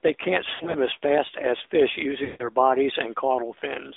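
Throughout, the sound runs through an AMR narrowband mobile codec. The band sits between roughly 250 Hz and 3.6 kHz, with nothing above 4 kHz, and there's a plainly audible buzzy, synthetic edge that fits a mid-rate mode around 10 kbps.

From 0.54 to 0.77 s, between "they can't" and "as fast as fish", lost AMR speech frames hit. About 100 ms of audio drops out, scattered across 200 ms, with the longest gap 60 ms. The decoder patches each gap by reusing the last good frame at falling gain, so you hear short warbly dips and a rough recovery.

At 2.24 to 2.48 s, right after "as fast as fish", there's a tighter loss of about 160 ms. The concealment stretches the last sound out and fades it toward silence before the signal comes back weak.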